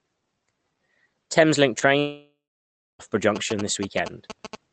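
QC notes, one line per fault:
1.79–1.83 s, short concealed packet loss: about 20 ms of speech is missing and the gap has been bridged by the receiver extending the sound just before it, then blending back into the real signal. The result is a brief smear or wobble rather than a hole. Unlike a plain dropout or an editing click, there is no silence and no hard edge. The fill carries the preceding pitch or noise colour, so it reads as a tiny wobble.
1.99–3.01 s, long network dropout: roughly a second of speech never plays. The sound first continues as a decaying buzz or hiss, then gives way to near-silence for about 0.6 s before speech resumes with that stretch simply gone. The likely cause is a network interruption that the concealment could only cover briefly. A natural pause would have no synthetic tail fading out of the last sound, and speech would pick up where it left off, not skip ahead.
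3.36 s to the end, GSM signalling bursts: a galloping dit-dit-dit of short buzzes sits about 10 dB below the speech, with the buzz at about 217 Hz. It comes from a nearby 2G phone's bursty radio transmissions being rectified in the audio circuit. Mains hum would be a steady 50 or 60 Hz tone. This fault arrives in rhythmic clusters with a rasping, pulsed texture, and it persists independently of the speech.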